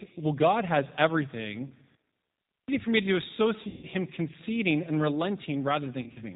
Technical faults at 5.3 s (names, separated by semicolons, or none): G.729 codec